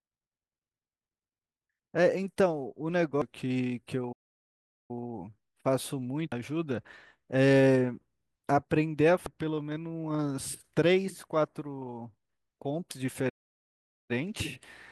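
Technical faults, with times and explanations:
3.22 s, 6.32 s, 9.26 s and 12.91 s, damaged data in a compressed stream: short blips where corrupted frames made the decoder misread them, lose sync and hunt for the next frame header.
4.12 to 4.91 s and 13.29 to 14.11 s, playback stall: the speech cuts to silence for about 0.77 s and 0.8 s, likely because the player ran out of data or its thread was blocked.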